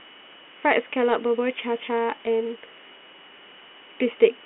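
No faults are audible: the speech sits in a telephone band of roughly 200 Hz to 3.4 kHz with nothing above 3.9 kHz, consistent with 40 kbit/s ADPCM coding whose added noise is at most faint.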